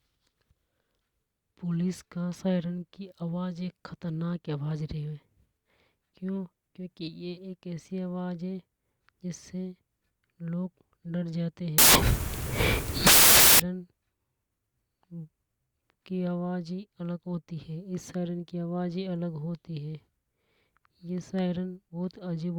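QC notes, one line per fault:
11.78–13.60 s, samples built from the wrong bytes: for about 1.8 s the reader assembled each speech sample from misaligned or swapped bytes, so the rapidly changing low-order bits landed in the high-order position, turning the passage into loud, harsh broadband noise, close to white on the louder sounds.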